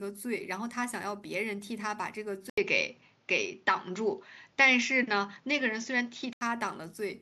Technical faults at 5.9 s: input switched to a poorer device

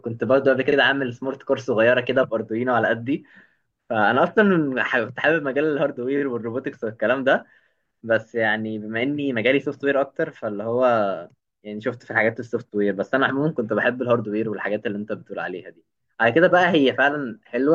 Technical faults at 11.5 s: none

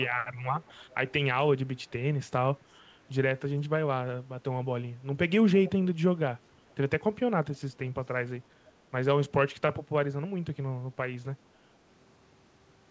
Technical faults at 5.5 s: echo leak

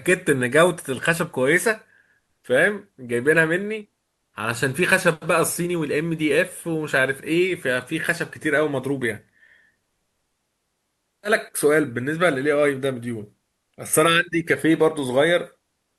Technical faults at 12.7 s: none

